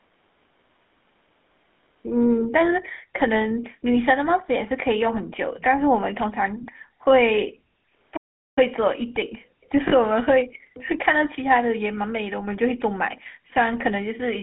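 The GSM full-rate codec colours the whole speech clip. The line runs from about 200 Hz to 3.5 kHz, with nothing above. The damage is plainly audible: a buzzy, gravelly roughness. This comes from a vocal-tract model driven by sparse, regular pulses, which fits a 13 kbps full-rate stream.

From 8.16 to 8.58 s, the sound stops dead mid-flow for about 0.4 s. This is a playback stall. The likely cause is that the player ran out of data or its thread was blocked, so the output sat silent until it recovered.

From 9.88 to 9.94 s there are lost GSM frames. The decoder fills the 40 ms gap by repeating the last good frame's settings. The result is a brief rough, metallic ring. The length fits two missing 20 ms frames.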